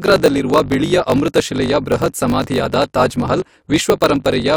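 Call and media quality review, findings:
Block size mismatch (truncated), present throughout. An upstream stage writes longer blocks than the downstream stage reads, so the tail of each block is dropped, which fits 1024-sample writes against a shorter read. Symptom: a steady 50 Hz buzz over the speech from the join at every block boundary. The speech also runs 1.16x fast at roughly normal pitch, because each kept segment still plays at its correct rate. Probable component: the buffer handoff between the processing stages.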